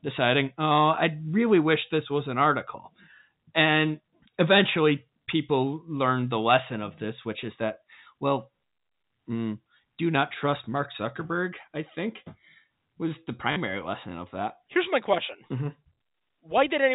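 Between "was the" and "lesson of that", from 13.52 to 13.56 s, packet loss with the last packet repeated fills a 40 ms gap, which fits two 20 ms packets replayed. The repeats give a brief robotic stutter. On the waveform, a copied block repeats with abrupt seams. On the spectrogram, the speech sits within the 4 kHz telephone band.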